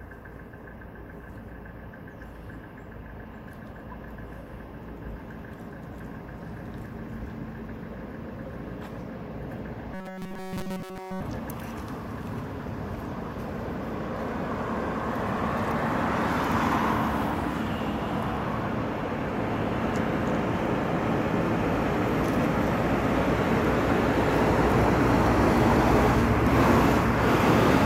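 From 9.94 to 11.21 s the sound becomes a rigid, metallic 188 Hz buzz: robotic sound from repeated short buffers, likely from a roughly 5.3 ms chunk replayed throughout. Spectrograms show evenly spaced lines every 188 Hz, and waveforms show one identical shape recurring.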